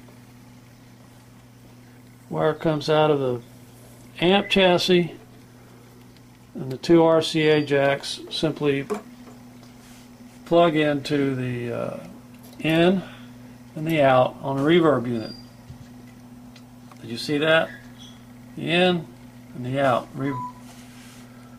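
Throughout, a block size mismatch (truncated) discards each block's tail, consistent with 1024-sample writes, causing a 43.1 Hz buzz at normal speed and pitch.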